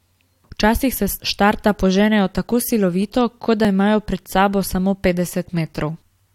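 Overlap between stream segments at 3.65 s in this speech recording: overlapping 2-second segment timestamps make the player discard real audio, leaving a brief jump heard as a tiny skip.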